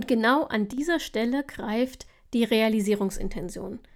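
At 0.73 s the speech drops abruptly by about 6 dB and holds there until 0.78 s, a brief 50 ms sag before the level snaps back. The cause is likely one channel dropping out: with one side of the stereo pair lost, the mono sum keeps only half of the shared signal. Unlike a full dropout or mute, the sound never goes silent, and unlike a gain fade, the step is instant at both edges.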